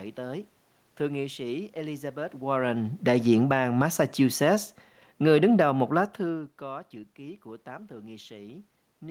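Automatic gain falling occurs twice, from 2.44 to 4.53 s and from 5.12 to 6.54 s, just before "có chữ ký của". Each time, the gain control judges the input too loud or its background noise too strong and pulls its gain down gradually, by about 4 dB and then about 3 dB. The speech and the room noise sink together rather than the voice alone fading, which is how it differs from the talker shifting position around 2.5 s and 6 s.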